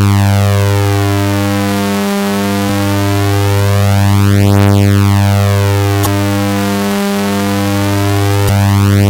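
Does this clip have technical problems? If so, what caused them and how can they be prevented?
Yes. Two short glitches break into the sound, from 6.02 to 6.07 s and from 8.45 to 8.50 s, each lasting roughly 40 ms. They come from damaged data in a compressed stream. At those points some bytes of the encoded file were lost, zeroed or overwritten, so the decoder misread the affected frames and lost its place while it hunted for the next valid frame header. Checksummed transfer or storage, and re-fetching the file when its integrity check fails, would prevent this.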